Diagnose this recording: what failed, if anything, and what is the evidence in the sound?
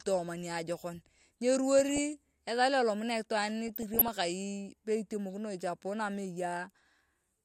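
DAB burbling in the codec stage, from 1.79 to 1.99 s and again from 3.66 to 4.08 s: short blips of noise over the speech. A few tenths of a percent of bit errors slipped past error correction, corrupting the MP2 audio data so single sub-bands get short blips of noise, unlike dropouts, which leave gaps or muting.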